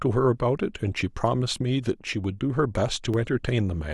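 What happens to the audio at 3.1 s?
A sharp tick at 3.14 s: a block of digital silence, about 1.5 ms long, likely a 64-sample buffer left unfilled, cuts abruptly to silence and back.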